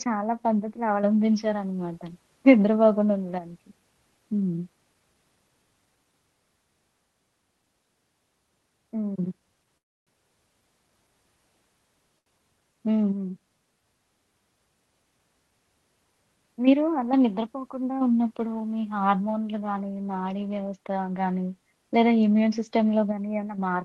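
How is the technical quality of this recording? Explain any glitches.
The recording carries three timing glitches from network delivery. The call path itself runs on a codec with a high-frequency ceiling near 12 kHz, consistent with Opus at around 20 kbps.

From 9.77 to 10.09 s there is a call audio freeze. The likely cause is packets stalling in transit until the jitter buffer drained. With nothing to play, the receiver held the last sound only momentarily before dropping into about 0.29 s of silence. When delivery resumed, the sound carried on exactly where it stopped. Nothing was lost, but a gap of roughly 0.3 s was inserted, and the stream ran that much later afterwards.

At 12.19 to 12.28 s comes a short stall from a late packet. One packet missed its playout deadline, the buffer briefly ran dry, and the receiver stretched the preceding sound by 74 ms to bridge the wait. Playback then resumed from the same point, so nothing is missing. 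What you hear is a sound held a touch too long, with a faint buzzy or dipping quality.

From 22.34 to 22.72 s there is a jitter buffer speed-up. The buffer was holding more audio than its target. To claw back latency, the receiver trimmed short pitch-period slices in rapid succession, removing something like 40 ms in total. The passage plays at about 108% speed while pitch stays unchanged, so it sounds slightly rushed.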